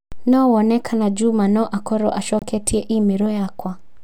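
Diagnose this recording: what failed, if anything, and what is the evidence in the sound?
The failure sits at the codec stage: damaged data in a compressed stream. Right after "no a korũo", from 2.39 to 2.43 s, a brief glitch replaces the speech as the decoder loses frame sync and resyncs. A buffer underrun would leave a silent gap instead.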